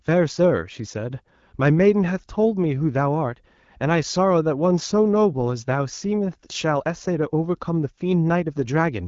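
No technical faults can be heard in this recording.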